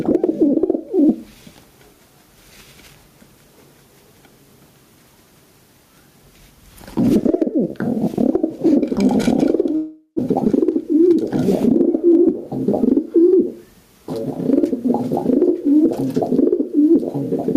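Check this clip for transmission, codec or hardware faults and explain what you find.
Three faults are audible: gain pumping across the whole clip, a long dropout just before 10 s, and a brief speed-up shortly after it.

Gain pumping runs throughout. The level swings by roughly 15 dB. The likely cause is input gain set far too high, with a fast limiter or compressor pulling it down on each peak, which squashes the dynamics.

A long network dropout occurs from 9.75 s to 10.20 s. The receiver likely stopped getting packets and concealed the gap by extending the last sound for about 430 ms as a fading buzz or hiss, then about 90 ms of silence. The audio resumes with roughly 400 ms missing.

A jitter buffer speed-up follows from 10.79 s to 11.36 s. The buffer held more audio than its target, so the receiver cut short pitch-period pieces repeatedly, removing about 40 ms in total. The sound plays at 105% speed without any change in pitch, and sounds briefly hurried.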